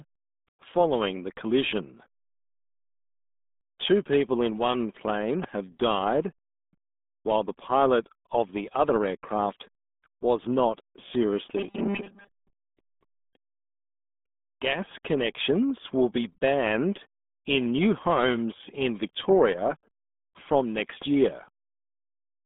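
Speech clip carrying the RealAudio 14.4 codec throughout: nothing above about 3.7 kHz survives, and heavy gargling fills the narrow band that remains, which fits an 8 kbit/s codec. A loud pop at 5.44 to 5.46 s, just after "people in one plane", stands roughly 15 dB over the signal, and a double pop at 20.80 to 21.04 s rises about 10 dB above it; both are likely voltage transients from a plug, switch or static discharge.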